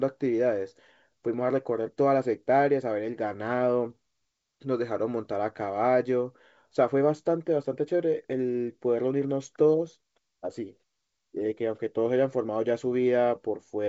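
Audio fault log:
Nothing to log here: the speech comes over the G.722 wideband telephone coding at 64 kbit/s just as that link should sound, with the audio reaching up to about 7.7 kHz and nothing above it.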